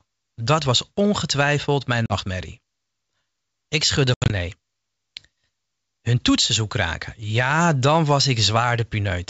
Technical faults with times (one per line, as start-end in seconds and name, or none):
2.06-2.13 packet loss on an ADPCM call
4.14-4.32 packet loss on an ADPCM call